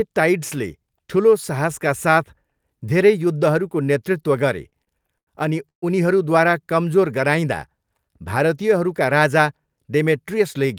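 Repeated stalls (stutter) run from 4.69 to 5.29 s, starting just after "धेरै युद्धहरूको नेतृत्व गरे" and ending before "अनि उनीहरूद्वारा कमजोर". The jitter buffer ran dry five times as packets arrived late, and each time the receiver stretched the last sound to bridge the wait, about 157 ms in all, the longest hold 90 ms. Roughly a quarter of that stretch is filler, so the speech drags and hiccups, yet nothing is lost.

A call audio freeze follows at 5.69 to 5.84 s, just before "उनीहरूद्वारा कमजोर". The speech halts and about 131 ms of gap is inserted, nearly all of it (about 120 ms) silence, before the speech resumes from exactly where it stopped, now running about 131 ms later. No speech is missing. This is likely a burst of packets held up in transit, draining the jitter buffer until they arrived together.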